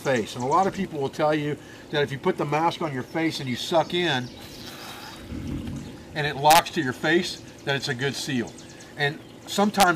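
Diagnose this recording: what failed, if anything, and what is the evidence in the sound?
Integer overflow at the sample-format conversion or fixed-point gain stage: violent cracks at 6.51 to 6.59 s and 9.80 to 9.83 s, where peaks run about 2 dB and 1 dB past full scale. Instead of being limited, those samples wrap to the opposite sign, jumping across the full range.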